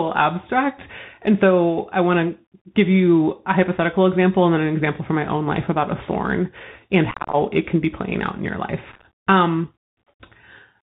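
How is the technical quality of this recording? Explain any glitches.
The quality is poor. The speech is narrowband and gritty from start to finish, and it breaks up twice.

The Bluetooth CVSD headset codec is present throughout. CVSD sends one bit per sample, saying only whether the waveform goes up or down, with a step size that adapts. Its damage is plainly audible here and fits a 64 kbps CVSD link. A spectrogram shows nothing above 4 kHz, with a fine granular hiss filling the band beneath the speech. Sibilants sound scratchy, and loud high-frequency bursts distort because the waveform rises faster than the step size can follow.

Unconcealed Bluetooth headset packet loss occurs from 7.11 to 7.35 s, right after "about a thorn and" and before "it can be playing". About 154 ms of audio is missing, scattered over 225 ms, and the longest single gap is about 26 ms. That points to dozens of short voice packets being dropped between the headset and the phone. 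Nothing fills those slots except silence or an idle pattern. On a waveform, the speech breaks into chopped fragments with abrupt flat holes. On a spectrogram, it appears as vertical blank stripes. It sounds like a rough, crackling stutter.

A second burst of the same loss runs from 8.92 to 9.05 s, just after "playing out in your". About 75 ms is lost across 128 ms, with no gap longer than 11 ms. Because the holes are shorter and fewer, the spectrogram shows thinner blank slivers. The sound is briefly chopped, and the speech resumes quieter for a moment as the CVSD step size recovers.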